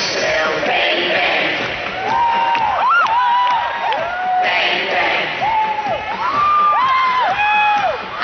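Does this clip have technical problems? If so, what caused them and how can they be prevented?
No, nothing in this clip stood out as a technical problem on listening.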